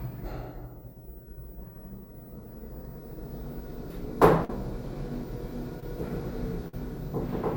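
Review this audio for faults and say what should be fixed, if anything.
Burst of packet loss at 4.44–4.50 s and 6.68–6.74 s: about 50 ms never arrived; the receiver extended and faded the last sound, then resumed past the gap.

Short concealed packet loss at 5.80–5.83 s: about 20 ms missing, bridged by synthesised continuation and blended back, heard as a brief smear.

A larger jitter buffer and forward error correction or redundancy on the network path would prevent these gaps.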